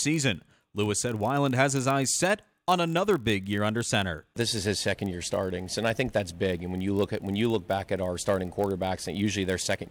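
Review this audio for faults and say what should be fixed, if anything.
A block size mismatch (padded) runs through the whole clip. One stage hands over blocks slightly shorter than the next stage reads, and the shortfall in each block is filled with zeros. That puts a tiny silent gap in every block, heard as a steady buzz at 43.1 Hz, which fits 1024-sample reads at 44.1 kHz. The gaps are so brief that the audio runs only marginally slow, at 0.999 times normal speed, with pitch essentially unchanged. On a waveform, the signal drops briefly to near zero about every 23 ms. A spectrogram shows thin vertical stripes at that spacing, plus harmonic lines stacked at multiples of 43.1 Hz. To prevent it, make the writing stage's output block size match the reading stage's, or buffer between the two stages rather than zero-filling.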